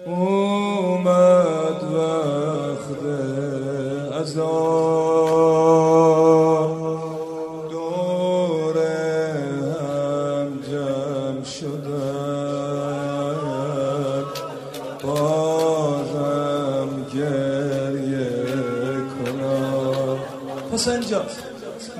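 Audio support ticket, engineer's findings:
Single sharp clicks at 5.33, 6.65, 7.80 and 16.87 s. Likely dropped samples: a fraction of a millisecond missing, so the waveform steps abruptly to a later value. Spectrogram shows thin full-height vertical lines; no audible gap in the audio.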